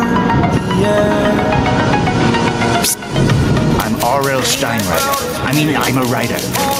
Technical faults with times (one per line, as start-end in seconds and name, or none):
0.00-6.80 gain pumping